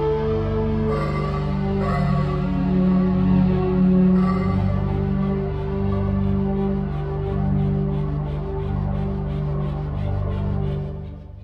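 No technical faults can be heard in the audio.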